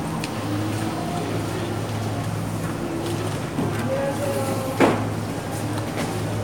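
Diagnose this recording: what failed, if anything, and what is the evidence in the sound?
Nothing failed in any stage of the chain: the signal stays continuous and stable throughout, with no breaks, level disturbances or spectral damage in the audio to point to a fault.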